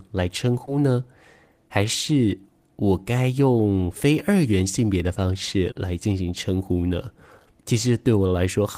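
Short concealed packet loss occurs twice in this speech clip. At 0.65 s, about 20 ms of audio failed to arrive in time, and the receiver covered the gap by extending the preceding sound before crossfading back. At 5.71 s a longer 40 ms hole was patched the same way, leaving a brief smear or wobble. Unlike a dropout, there is no silent gap: the sound carries on, just blurred.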